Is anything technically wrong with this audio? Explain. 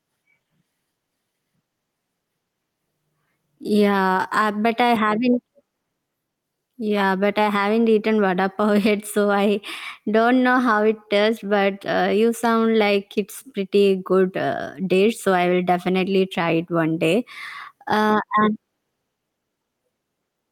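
Yes, there's gain pumping all the way through this speech. The level is likely set far too hot, so a fast limiter keeps clamping down on each loud syllable. The gain swings by around 5 dB, leaving it squashed.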